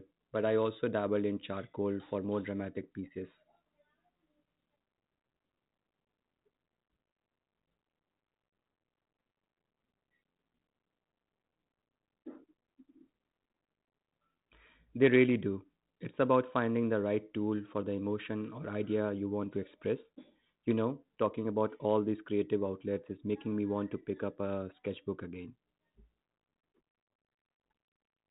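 The clip is speech carried over G.726 ADPCM at 32 kbit/s, and nothing in it is technically wrong.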